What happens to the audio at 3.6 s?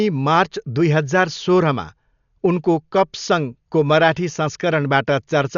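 At 3.6 s the speech sounds dull, with nothing above about 6.9 kHz, and a rough, fluttering noise hangs around its tonal parts. This isn't a local event: the same damage runs through the whole clip. The likely cause is Dolby Digital compression at a starved bitrate, which fits roughly 48 kbps. The encoder cuts the upper band and leaves many frequency lines without mantissa bits, so the decoder fills them with dither noise, producing that grainy flutter.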